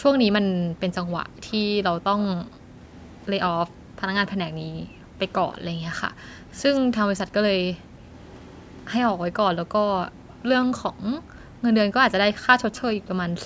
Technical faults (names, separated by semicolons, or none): echo leak; background gated by the echo canceller